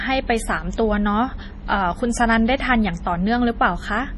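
MP3 compression, throughout: heavy damage, likely from an encode starved of bits near 32 kbps, cuts everything above 11.4 kHz and leaves the speech watery and swirly.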